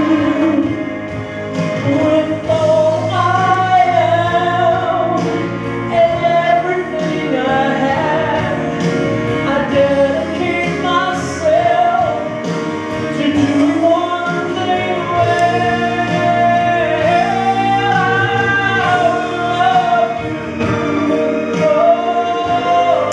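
Nothing here needs fixing: the audio runs along steadily with no dropouts, glitches, distortion or other technical trouble to point to anywhere in it.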